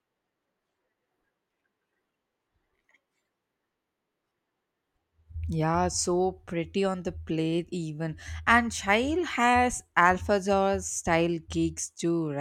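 No technical faults are audible.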